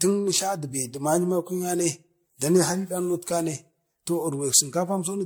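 Generation loss runs through the whole clip: the speech sounds swirly and hollow, consonant attacks are smeared, and nothing reaches above 19.9 kHz. This is likely the result of repeated lossy MP3 encoding, around ten passes at rates near 100 kbit/s. Each decode and re-encode quantises the signal again on a shifted frame grid, so noise and spectral holes accumulate into more damage than that bitrate would cause alone.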